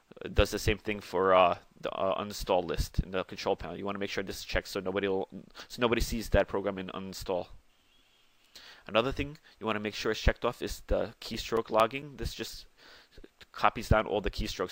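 From 10.66 to 12.93 s there are CD scratch ticks: 11 short clicks or micro-dropouts, roughly five per second, none longer than a few milliseconds. A disc blemish corrupts more data than error correction can repair on each rotation, so the player conceals those samples.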